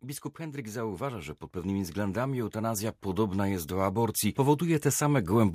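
From 0.36 s to 5.5 s the speech shows automatic gain rising: the gain control judged the input too quiet and kept lifting it, about 12 dB overall. Voice and background noise swell together, and the waveform envelope widens steadily while the spectrogram brightens evenly across all frequencies.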